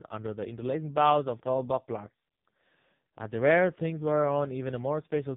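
Throughout, the speech carries heavy AMR narrowband mobile codec damage. Nothing passes above 3.8 kHz. The buzzy, synthetic tone fits a very low bitrate, around 5 kbps.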